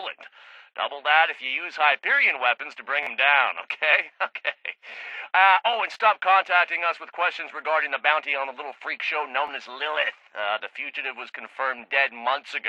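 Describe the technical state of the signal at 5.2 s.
At 5.2 s the signal is intact, with no dropout, distortion, glitch or other technical fault at that point.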